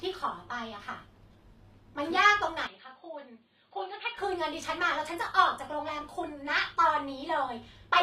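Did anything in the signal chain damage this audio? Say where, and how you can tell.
Yes. Throughout, the treble sounds gritty and lispy on sibilants, bright yet not quite true, with nothing above 15.5 kHz. At the codec stage, this is likely HE-AAC compression: spectral band replication rebuilds the top octaves from copied lower bands, consistent with roughly 24 kbps.

From 2.67 s to 4.18 s the sound turns dull and boxy, cut off above 4.7 kHz, drops by around 10 dB and carries a faint new noise floor, with no gap at either edge. That points to an input switched to a poorer device, likely at the driver level.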